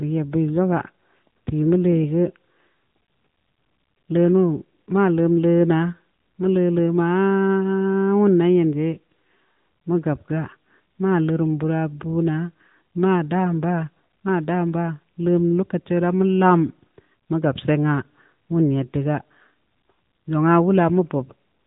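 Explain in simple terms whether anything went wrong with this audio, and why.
The whole recording went through the AMR narrowband mobile codec, the compression used for ordinary 2G and 3G phone calls. Everything above about 3.8 kHz is gone, so the voice sounds boxed-in and muffled, and the codec's simplified model of the speaking voice gives it a plainly audible buzzy, synthetic edge from start to finish. A simple treble cut would only dull the sound; here the voice itself has that rebuilt, phone-call character.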